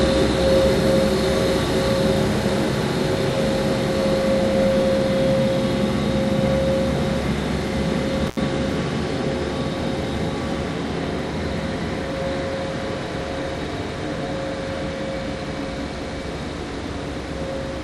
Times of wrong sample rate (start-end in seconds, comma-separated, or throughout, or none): none